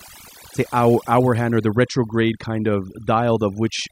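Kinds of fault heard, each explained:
Overdone noise removal: a noise reduction stage set far too aggressively is pulling individual frequency bands down to almost nothing whenever they sit close to its noise estimate, and the quieter parts of the speech are being removed along with the noise. Across the whole clip, the background collapses into near silence scattered with twinkling, chirpy specks, while the voice has its softer detail hollowed out.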